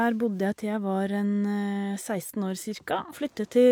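At 3.09 s, lasting until 3.14 s, the speech is broken by a short glitch from damaged data in a compressed stream. Corrupted bytes leave the decoder unable to read those frames correctly, so it loses sync and outputs garbled sound while searching for the next valid frame header.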